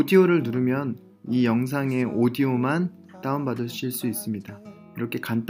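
No technical faults are audible anywhere in the clip.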